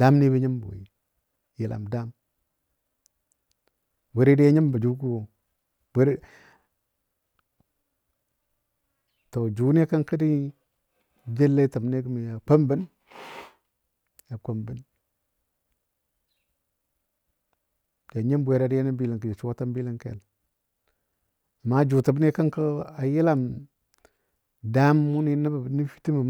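Listening closely to the speech, nothing stood out as a technical problem at any point.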